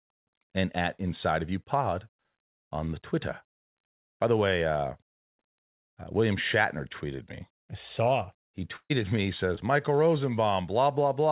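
At 8.76 to 8.92 s there is a burst of packet loss. About 140 ms of the speech never arrived, and the receiver stretched the last sound across roughly 137 ms, fading it so the held sound thins and the final 60 ms drops to silence before the talker picks up later in the sentence. Unlike a short concealed loss, this gap is long enough to hear the last sound held and decaying into a hole, with a clear jump in content afterwards.

At 9.56 to 9.59 s comes a short concealed packet loss. About 20 ms went missing, and the receiver patched it by continuing the preceding sound for about 11 ms before blending back into the real signal. The result is a brief smear or wobble rather than an audible dropout, with no fade to silence. The difference from the burst is scale: a quick blemish against a held sound trailing into quiet. Both sit on the narrowband G.711 call sound, with nothing above 4 kHz.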